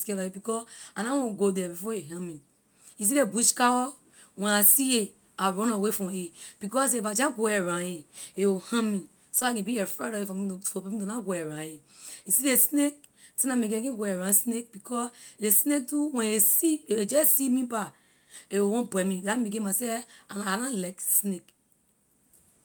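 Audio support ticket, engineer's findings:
Short concealed packet loss at 9.39–9.43 s, between "a will harm me" and "I can be afraid". Brief smear in the speech. About 20 ms of audio never arrived at the decoder in time. Receiver-side concealment extended the preceding sound across the gap, then crossfaded back into real audio.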